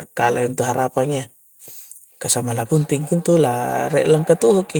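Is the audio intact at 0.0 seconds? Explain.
Yes, the speech is intact at 0.0 seconds, with no fault audible at that moment.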